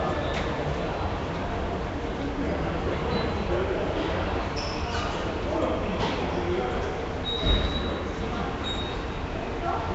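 From start to finish, a rough, hissy halo clings to the sound, detail smears into a watery blur, and nothing reaches above 7.8 kHz. The likely cause is Nellymoser compression, whose coarse block coding leaves weak bands noise-filled, which fits a low bitrate around 32 kbps.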